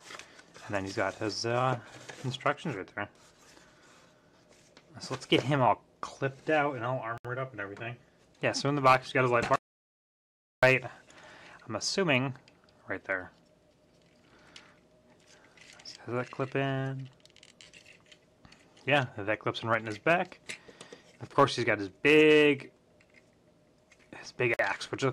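At 7.18 s and again at 24.54 s, a gap at a join of encoded pieces breaks the continuous sound, lasting about 69 ms and 54 ms. Separately encoded sections were joined untrimmed, leaving encoder start delay and last-frame padding. Each silence has smeared edges before the sound resumes where it stopped.

From 9.56 s to 10.63 s, an audio dropout to silence removes 1.07 s. The sound cuts off mid-flow into silence with no room tone, likely from lost input such as a disconnected device or failed link.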